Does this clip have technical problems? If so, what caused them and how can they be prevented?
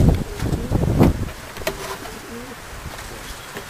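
No, this clip has no technical problems, so there is no cause to identify and nothing to prevent.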